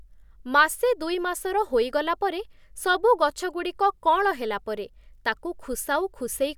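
No technical faults can be heard anywhere in it.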